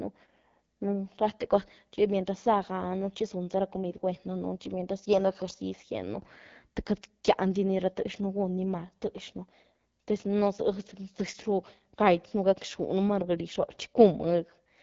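Speech processed through the AMR wideband (HD Voice) codec, with plainly audible damage throughout: the voice sounds rough and raspy, which points to one of the lowest modes, around 8.85 kbit/s. Nothing is present above 7.5 kHz, and the top band sounds like shaped noise rather than real detail. Narrowband AMR would cut off near 3.4 kHz, and a low-rate MP3 would give swirly, watery artefacts rather than this buzzy grain.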